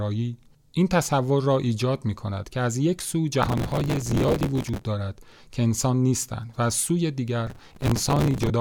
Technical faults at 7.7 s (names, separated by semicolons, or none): processor overload crackle